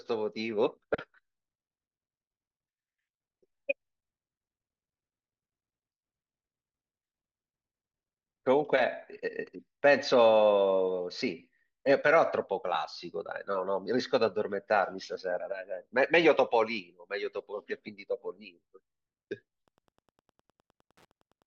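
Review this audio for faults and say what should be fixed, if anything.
Wi-Fi interference, 19.67 s to 21.47 s: the audio circuit rectifies a nearby radio's 102.4 ms beacon, causing faint ticking ten times a second beneath the speech. Keep Wi-Fi devices away from the microphone, preamp and cabling, and use shielded, well-grounded connections.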